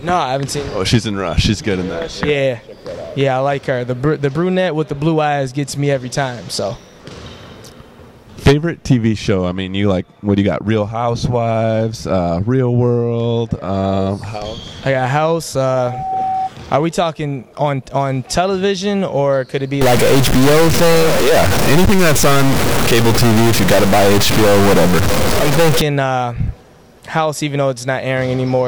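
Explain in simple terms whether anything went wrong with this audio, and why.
From 15.65 to 16.51 s a 759 Hz whistle swells over about half a second into a loudspeaker feedback squeal about as loud as the rest of the sound, as the microphone catches its own speaker.

From 19.81 to 25.81 s the sound turns harsh and buzzy, with noise filling the pauses, likely a stuck bit: one digital bit frozen, corrupting many values.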